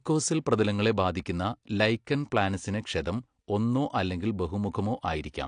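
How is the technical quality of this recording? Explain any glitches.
The speech sounds dull and smeared all the way through, with nothing above about 9.8 kHz and a warbling, fizzy texture on sibilants and held vowels. These are the plainly audible signs of AAC compression, likely at a low bitrate, around 32 kbps. With so few bits available, the encoder drops the top of the spectrum and quantises each frame's frequency lines coarsely against its hearing model. That leaves gaps and smearing that shift from frame to frame.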